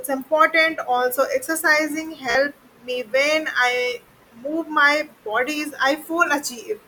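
At 2.31 s, Bluetooth stutter: lost packets made the receiver replay its last buffer for 43.5 ms, a brief buzzing repeat before speech jumps ahead.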